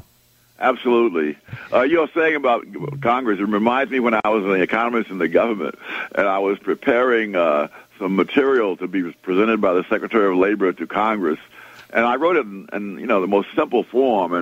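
A gap at a join of encoded pieces opens at 4.20 to 4.25 s: separately encoded sections were spliced untrimmed, leaving about 43 ms of padding silence before the sound resumes.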